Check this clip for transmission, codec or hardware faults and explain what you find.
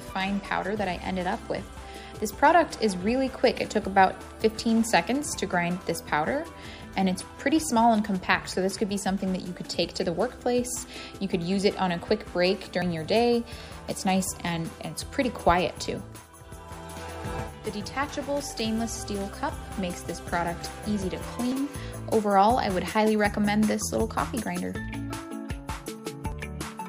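Three short skips are audible, at 12.82 s, 21.52 s and 26.32 s. Each is a jump in the sound, likely from a dropped buffer (overrun). Samples were overwritten before being read. The gaps are joined directly, losing about 70 ms first, then about 20 ms twice.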